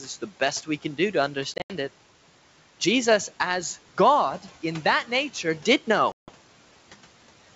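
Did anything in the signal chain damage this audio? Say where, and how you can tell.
Yes, the network stage damaged it with packet loss on an ADPCM call. After "do to", from 1.54 to 1.72 s, about 120 ms of audio is replaced by silence in broken holes spread over 160 ms, the longest 80 ms. After "in that nature did", from 6.12 to 6.32 s, a solid 160 ms hole appears. This is not a simple dropout: the hard-edged silence is followed by slightly distorted speech that settles within tens of milliseconds. That happens because the decoder's adaptive predictor and step size have lost step with the sender's.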